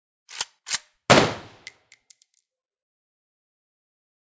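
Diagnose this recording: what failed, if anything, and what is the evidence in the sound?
Nothing failed here: no stage from capture through to playback leaves any trace on these sounds. There is no evidence in the sound of a fault at any point in the recording.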